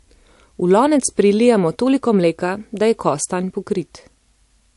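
Throughout, the speech sounds watery and swirly, likely MP3 compression at a low bitrate; a spectrogram shows a hard cutoff at 11.3 kHz and flickering patches below it.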